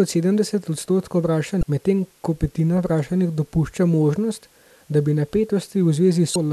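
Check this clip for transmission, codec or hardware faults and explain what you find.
Two faults, both damaged data in a compressed stream. At 1.60–1.63 s, between "sedemdeset odstotkov" and "medtem ko petina vprašanih", and again at 6.32–6.36 s, corrupted bytes throw the decoder out of frame sync until it finds the next header. Each is heard as a brief glitch.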